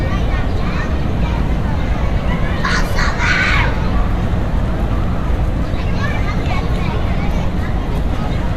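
No technical faults can be heard anywhere here.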